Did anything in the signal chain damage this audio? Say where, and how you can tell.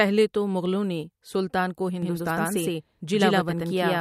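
Yes. From 2.02 s to the end, the speech is doubled. A second full-band copy trails the first by about a tenth of a second, at roughly equal level. It cuts in abruptly, with no build-up. It carries no decay or room colour, so it is not an echo or reverb. This is a doubled audio track. The likely cause is a driver or buffer stage feeding the same capture twice, once through a slower path.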